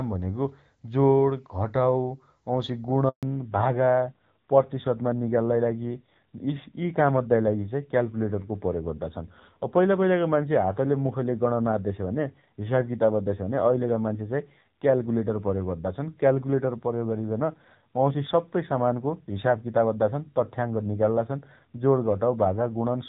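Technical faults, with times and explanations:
3.09–3.23 s, handover gap: the speech fades out within a few tens of milliseconds and leaves 140 ms of true silence while the call moves between networks. The fade and the clean silence set it apart from a packet-loss dropout, which is usually masked by concealment noise or repeated fragments.
3.23 s to the end, fallback to narrowband: from just after the gap, nothing above 4 kHz remains, so the speech sounds duller and rougher. The band limit arrives suddenly and then holds, which marks a codec switch rather than filtering. Before the gap the wideband call sounds clear, which fits HD Voice near 12.65 kbit/s, and the coarser texture afterwards fits a narrowband codec near 7.4 kbit/s.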